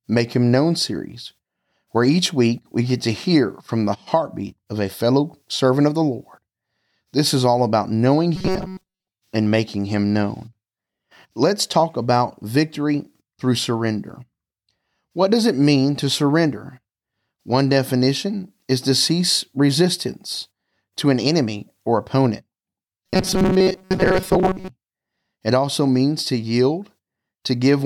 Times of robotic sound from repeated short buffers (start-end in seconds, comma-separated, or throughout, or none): 8.36-9.08, 23.07-24.69